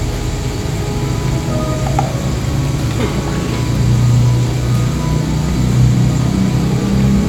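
Nothing stood out on listening to this recording of sounds.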